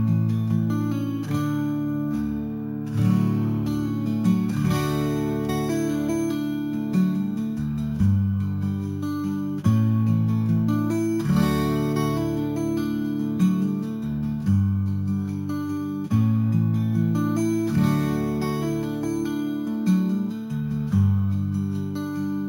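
Throughout the clip, the audio has been raised from a 16 kHz rate to 48 kHz by holding each sample for three output samples, with no smoothing filter. This sample-and-hold upsampling leaves imaging: mirror copies of the spectrum, the first spanning 8 to 16 kHz at about 28 dB below the signal. They come across as a bright, metallic fizz that swells and fades with the sound, and the lowest copy drifts opposite to any pitch movement.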